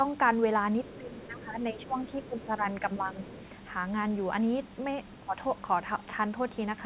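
From 0.85 to 2.63 s there's other side's voice leaking through, faint, roughly 25 dB under the talker. The loudspeaker sound was likely not fully removed by the echo canceller. A shorter scrap comes back at 3.34 to 3.45 s, a bit louder, about 20 dB down.

Overlapping that first leak, from 0.94 to 3.31 s, there's speech suppressed in double talk. The talker's level dips by up to around 15 dB in pieces totalling about a second, likely because the canceller couldn't tell the talker from the echo and ducked both. There's a smaller dip of about 10 dB at 5.2 to 5.36 s.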